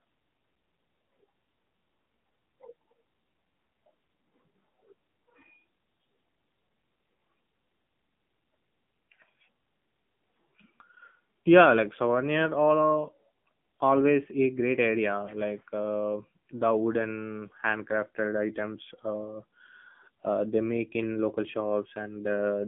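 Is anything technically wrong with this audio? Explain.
Yes. Throughout, AMR narrowband mobile codec: a pulse-driven vocal-tract model codes speech on a line of about 150 Hz to 3.5 kHz, nothing above 3.6 kHz, with a buzzy, synthetic edge fitting a 7.4 kbps mode. That buzz separates it from a plain band-limited line.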